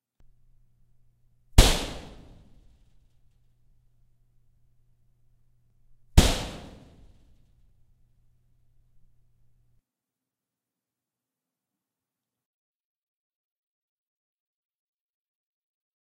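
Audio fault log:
5.70 s and 7.69 s, overlap between stream segments: Two tiny skips, about two seconds apart. At each segment join, overlapping time stamps made the player trim real sound. Under 20 ms is lost, so the waveform jumps. The spacing fits 2-second segments.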